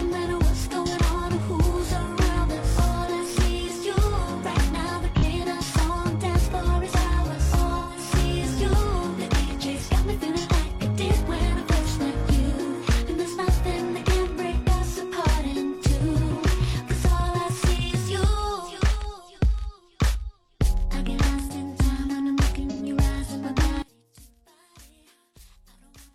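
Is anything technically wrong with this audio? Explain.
Yes. Brief smeared, noisy, phasey patches appear at 5.18 to 5.24 s (about 43 ms), 7.78 to 7.97 s (128 ms) and 22.71 to 22.82 s (about 85 ms). This is AAC frame loss with concealment: the decoder rebuilds the gaps from the last good spectrum, and the durations fit one, three and two lost frames.

From 23.82 s to the end, the level drops by about 29 dB and only a faint residue remains. The likely cause is one channel inverted, so the material common to both channels cancels when they are summed to mono.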